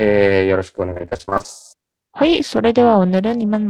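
A speech recording with two problems. Periodic clock jitter runs through the whole clip: interference on the converter clock at around 400 Hz puts paired sidebands that far above and below every speech component, strongest on high frequencies. It gives the speech a rough, metallic edge that disappears in pauses. On a spectrogram, mirrored copies track each harmonic at that offset. Repeated packet loss then makes the speech choppy and robotic from 0.89 to 1.50 s. Many short holes, the longest 28 ms, were patched by extending the preceding sound, so about half that stretch is filled-in material. The waveform shows stuttering, repetitive segments, and the spectrogram shows smeared, copied frames alternating with real ones.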